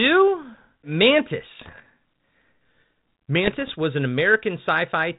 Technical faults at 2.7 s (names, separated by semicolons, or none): none